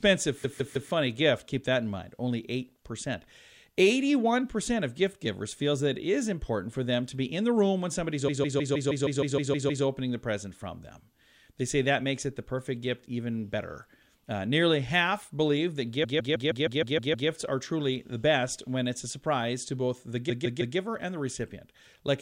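Repeated frames occur four times: 0.43–0.90 s, 8.27–9.84 s, 16.03–17.28 s and 20.29–20.76 s. Each time, a 156.7 ms block of compressed audio, which fits a run of six frames, is decoded again and again, giving a rhythmic stutter. The block plays 3, 10, 8 and 3 extra times respectively, adding 0.47 s, 1.57 s, 1.25 s and 0.47 s to the running time.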